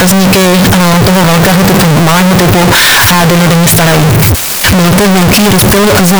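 From start to finish the speech is blasting and harsh, turned into near-square waves at an almost fixed, high level. Noise matches speech level. Pitch survives. Likely float read as integer.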